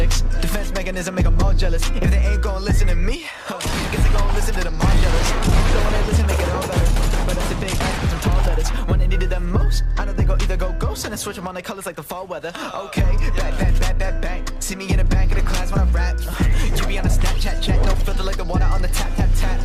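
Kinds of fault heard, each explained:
No faults of any kind can be heard here.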